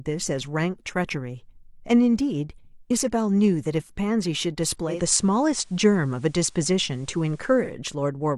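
Digital radio blending to analogue from 4.85 to 7.78 s: the receiver lost its digital signal and cross-faded over about 195 ms to the station's FM broadcast, then back. The speech shifts about 3 dB in level and gains faint hiss roughly 40 dB down.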